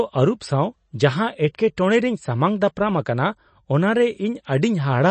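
From start to finish the speech carries MP3 compression damage, and it is plainly audible. Nothing sounds above about 8.3 kHz, so the treble is cut flat at that point. The encoder likely ran very short of bits, which fits a bitrate near 32 kbps. Weak frequency detail switches on and off between frames. That gives a watery, swirling quality. The s sounds turn dull and metallic, and sharp onsets smear.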